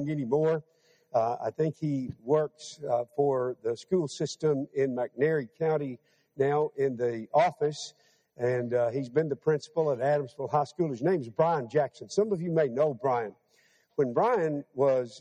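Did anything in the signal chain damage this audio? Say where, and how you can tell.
Yes. A noise suppressor is applied to music or sounds, a call-processing stage, throughout the clip. A speech-tuned suppressor is treating sustained, steady parts of this audio as background noise and pulling them down while sharper onsets pass. The gain it applies keeps moving by roughly 5 dB, so the level pumps and held material thins out instead of sitting at a stable level.

Sound cut by the noise suppressor is heard at 0.62 to 1.14 s, 2.12 to 2.27 s, 5.98 to 6.39 s, 7.91 to 8.17 s and 13.32 to 13.74 s. In each window the suppressor misjudged steady or decaying sound as noise and clamped it harder than its usual swing, by about 12 dB, or about 11 dB at 7.91 s. The drop-outs are short, totalling a fraction of a second each, with tails and sustains sinking abruptly.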